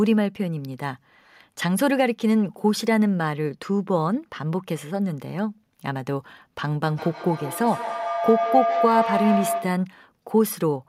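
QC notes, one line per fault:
6.83–9.9 s, feedback howl: a tone centred around 700 Hz rises out of the speech and peaks at about 2 dB below the speech level, with the loop repeating roughly every 150 ms. Two devices in the same room share the call, so the microphone picks up its own output through the other loudspeaker. Each trip round that loop adds gain, and the repeats narrow to the frequency the loop favours. The howl persists until the loop breaks at 9.9 s.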